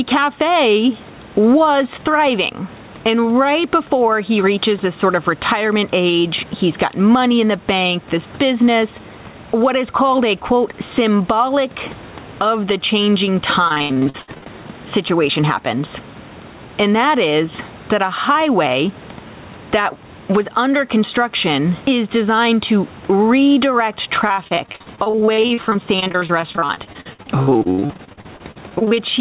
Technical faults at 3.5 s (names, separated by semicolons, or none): gain pumping